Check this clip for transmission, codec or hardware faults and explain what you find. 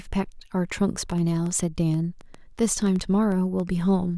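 One fault is present. From 1.12 to 3.61 s, a train of clicks runs through the speech: about fifteen similar pulses, roughly 4.8 per second, unevenly spaced and peaking about as loud as the speech, most likely from equipment interference or a faulty connection or power supply.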